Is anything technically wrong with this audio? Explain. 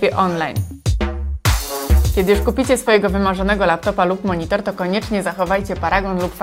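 Yes. From 0.21 s to 6.19 s there are clock slip clicks, faint regular ticks about every 0.3 s, around twenty in all. They likely come from two unsynchronised clocks differing by roughly 70 ppm, so one sample is dropped or repeated whenever the drift reaches a whole sample.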